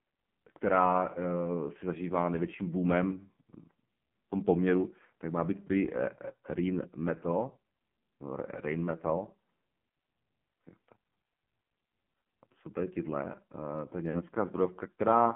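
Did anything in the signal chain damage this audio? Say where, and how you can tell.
Yes. Codec stage: AMR narrowband mobile codec throughout, band-limited to about 150 Hz to 3.4 kHz, with a buzzy, synthetic texture. That texture, not just dullness, separates it from a plain low-pass filter. The heavy damage fits a low mode near 5.9 kbps.

Network stage: lost AMR speech frames from 14.10 to 14.23 s. The decoder stretched the last good sound and faded it, rather than cutting abruptly to silence. This fits two lost frames.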